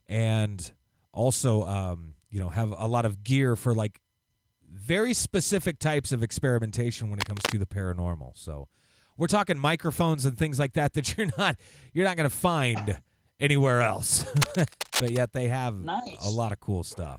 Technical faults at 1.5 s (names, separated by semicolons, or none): none